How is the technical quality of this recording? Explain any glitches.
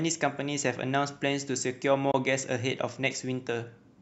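The speech has one audible glitch: a short gap a little past the two-second mark.

From 2.11 to 2.14 s the sound drops out for about 21 ms, the hallmark of a Bluetooth dropout. The likely cause is a packet that never reached the headphones in time, and a hole this brief fits a single lost packet. Playback halts, then resumes further along, as though the speech had kept playing through the gap. On a waveform it shows as a flat notch, and on a spectrogram as a thin vertical band of silence across all frequencies.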